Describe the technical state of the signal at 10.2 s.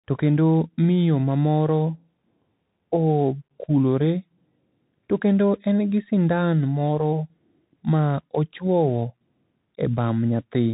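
At 10.2 s the speech still carries the Bluetooth CVSD headset codec that runs the whole clip. One-bit up/down coding with an adapting step, consistent with 64 kbps CVSD, leaves scratchy sibilants and granular hiss. A spectrogram shows nothing above 3.8 kHz and a grainy noise floor.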